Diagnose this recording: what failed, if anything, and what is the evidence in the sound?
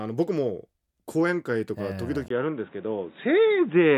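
At 2.28 s, after a 20 ms gap, the speech turns dull and boxy, with nothing above 3.8 kHz and new faint noise. At the driver stage, the input likely switched to a poorer device.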